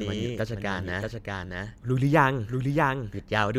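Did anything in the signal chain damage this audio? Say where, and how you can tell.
Yes. The speech carries a doubled audio track from start to finish: a second full-band copy follows roughly 0.7 s behind the first, at a level about 5 dB quieter. This is not acoustic echo or room reverb, because the copy has no decay, no tail of further repeats, and no room colouring. The gap never changes. That points to the likely cause: a second, slower capture path in the driver or buffer stage mixed back in, or an edit holding two misaligned copies.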